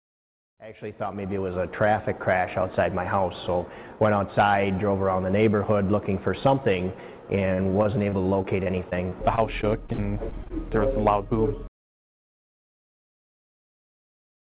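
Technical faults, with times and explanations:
7.3–10.52 s, repeated packet loss (robotic sound): packets kept going missing or arriving late, leaving 19 holes, the longest 56 ms. Each was patched by extending the preceding sound, so the passage turns choppy, with fragments dropped, over the call's band-limited sound, which stops at 4 kHz.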